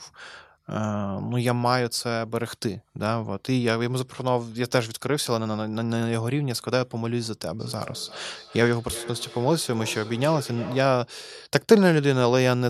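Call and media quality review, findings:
Feedback echo between two devices, 7.59 to 11.12 s: speech comes back roughly every third of a second, thin and ringy, peaking about 16 dB under the talker. Second device in the room replaying this mic's own audio back into it, which its own canceller can't remove.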